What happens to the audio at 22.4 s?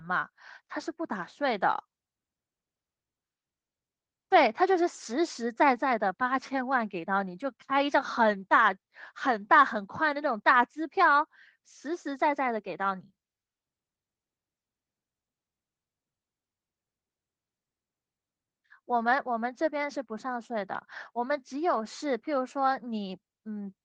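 At 22.4 s the audio is intact, with no dropout, click or distortion in the speech at that moment.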